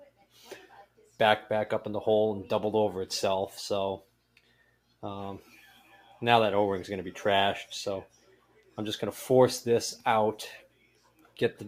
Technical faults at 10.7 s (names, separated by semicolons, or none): noise suppressor applied to music or sounds; sound cut by the noise suppressor